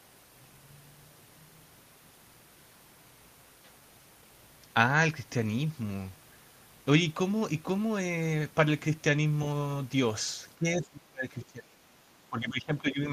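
From 10.55 to 10.65 s, 10.82 to 12.03 s and 12.3 to 13.08 s, the speech sinks by about 15, 25 and 15 dB. This is likely speech suppressed in double talk, with an echo canceller ducking its own talker. Unlike packet loss, the speech is turned down by the echo canceller, not lost in transit.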